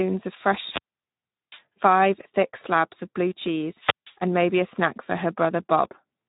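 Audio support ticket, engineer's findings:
Speex codec damage throughout the speech, plainly audible: hoarse, noisy texture, nothing above 3.8 kHz. The encoder has too few bits to model the excitation, so detail becomes noise. Consistent with a low setting near 11 kbps.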